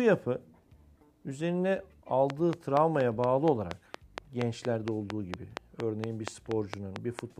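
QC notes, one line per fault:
2.30–7.20 s, train of clicks: A steady ticking of about 4.3 clicks per second runs over the sound, around twenty in all. Each click has much the same sharp shape and stands well above the signal. Interference from nearby equipment is the likely cause.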